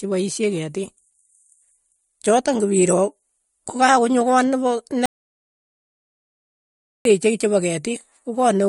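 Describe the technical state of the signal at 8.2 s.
At 8.2 s you're hearing the same MP3 compression damage that runs through the whole clip. Nothing gets through above 11.2 kHz, so the top end is simply sliced off, and the artefacts are plainly audible, a watery, swirly quality where the encoder has starved weak frequency lines and let them flicker in and out between frames. That's likely from a fairly low bitrate, and the sound fits something around 48 kbps.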